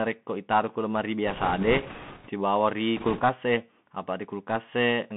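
From start to finish this has the sound of the Bluetooth CVSD headset codec. Everything is squeezed into a phone-style band of roughly 150 Hz to 3.4 kHz, which fits a 64 kbps CVSD stream. That codec sends just one up-or-down bit per sample and keeps adjusting its step size, so it can't track fast loud high content. You hear that as scratchy, smeared s sounds and a grainy hiss sitting under the speech, and it's plainly audible throughout.

Right after "itaro ku lemari", from 1.27 to 2.29 s, bit errors on a Bluetooth voice link kick in. It sounds like a few percent of bits getting flipped. With CVSD each bit only nudges the waveform a little and the damage fades quickly, so you don't get sharp clicks. You get a rushing, crackly layer over the speech instead. The same thing comes back briefly from 2.97 to 3.22 s, a touch rougher there, at around four percent errors.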